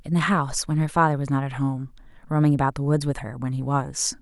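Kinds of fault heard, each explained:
No technical fault can be heard in this speech recording, and the signal holds steady throughout without dropouts, distortion or interruptions.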